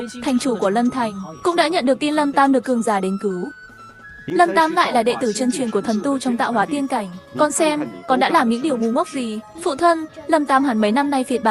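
No technical faults are audible.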